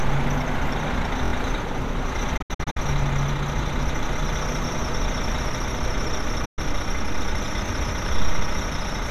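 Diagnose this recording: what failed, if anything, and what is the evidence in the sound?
The driver or buffer stage failed twice with a repeated buffer. At 1.25 s a 23 ms slice of sound plays three extra times, with a hard join at each repeat, until 1.32 s. Roughly 70 ms of real audio is lost. At 7.66 s the same thing happens once, costing about 20 ms. New data arrived late, so the device replayed its last block. The 23 ms length fits a 1024-sample buffer.

The digital broadcast reception failed twice, each time as a digital broadcast dropout. From 2.37 s to 2.77 s the sound breaks into several short silent holes, totalling 216 ms. The longest hole is 72 ms. Each cut has an 8 ms fade. At 6.45 s a single 120 ms gap follows, with the same quick fade, until 6.59 s. The receiver muted on bad or missing frames. Whatever was sent then is gone. The first event points to about nine lost frames.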